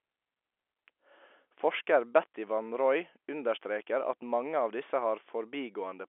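No faults are audible in this telephone-band speech.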